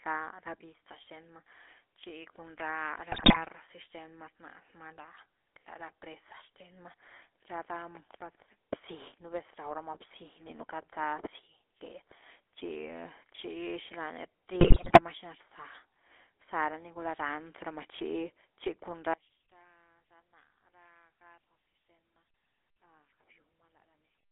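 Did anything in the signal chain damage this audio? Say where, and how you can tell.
Yes. The whole clip has a buzzy, gravelly roughness, and nothing reaches past about 3.5 kHz or below about 300 Hz. That points to the codec stage: a GSM full-rate codec, consistent with a 13 kbit/s speech coder. It models the vocal tract as a filter and excites it with a sparse, regularly spaced pulse train, discarding most of the excitation detail. That coarse excitation causes the rasp, and the narrow telephone band dulls everything.

Two bursts of squawking, popping gargle interrupt the speech, from 3.12 to 3.43 s and from 14.6 to 15.01 s. These are GSM bit errors on the network leg. Corrupted bits in the transmitted parameters reached the decoder, so for the affected frames the filter shape, pitch and gain were rebuilt from wrong values. That bends the spectrum and throws the level around for a fraction of a second. 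The error rate on the link was clearly high during both bursts.

From 19.14 s to the end, the sound drops by about 30 dB and turns into a faint residue. The likely cause is one channel inverted at the playback or wiring stage. With one stereo side polarity-reversed, anything common to both channels cancels when they are summed to mono. A centred signal like this nearly disappears, leaving only the small differences between the two sides.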